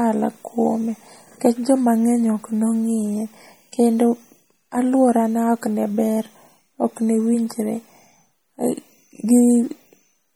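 Speech runs through the whole clip with plainly audible MP3 compression damage. The sound is watery and swirly, with blurred consonant edges. That fits a low MP3 bitrate near 48 kbps, likely starving the encoder so that weak frequency lines drop in and out between frames.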